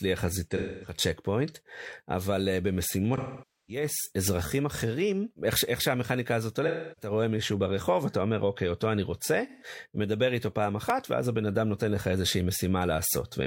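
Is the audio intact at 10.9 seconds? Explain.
No. At 10.90 s the speech drops out in a block of digital silence about 2.7 ms long, which fits a 128-sample buffer left unfilled. The waveform jumps straight to silence and straight back, with no fade at either edge. Because the hole is so brief, it comes across as a tick or dip rather than an audible gap.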